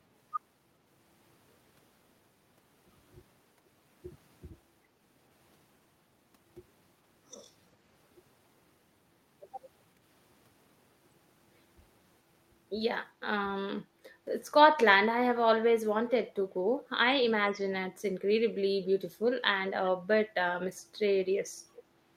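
Speech with echo leak: brief, faint delayed copies of the voice at 16.08–16.12, 19.84–19.89, 20.76–20.81 and 21.75–21.83 s, each trailing by about 0.38 s at roughly 15 to 40 dB below the speech, likely from a loudspeaker-side echo canceller letting residue through. Unlike room reverberation, these are discrete repeats at a fixed lag, not a smooth decaying tail.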